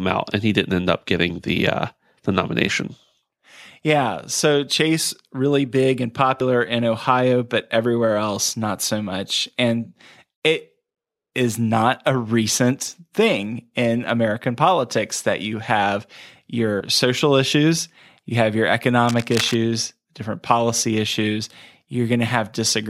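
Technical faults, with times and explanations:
6.40 s and 16.80 s, compressed frames skipped: two frames of about 26.1 ms each went unplayed, so around 50 ms of speech vanishes just after "really big and" and just before "social issues you have". Each join is a brief smeared blip.
19.07–19.55 s, cable scratch noise: most likely a worn cable or connector being moved, making its contact resistance jump. This causes dense rustling bursts roughly 10 dB below the speech between "issues you have your" and "different policy issues".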